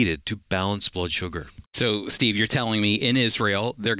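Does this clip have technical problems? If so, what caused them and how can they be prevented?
No, this clip has no technical problems, so there is nothing to trace to a cause or prevent.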